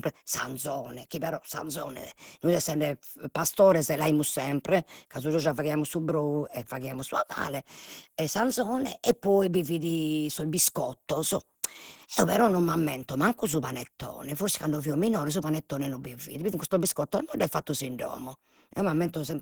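Throughout the speech, the sound is rough and grainy, with a muffled, hoarse edge. Energy reaches up to about 20.3 kHz, so the top end is present, but it sounds noise-filled rather than detailed, and the damage is plainly audible. This points to Opus compression as the likely cause, running in its hybrid mode at a low rate that fits roughly 16 kbps: the low band goes through the speech coder, and the upper bands are filled with noise where too few bits remain.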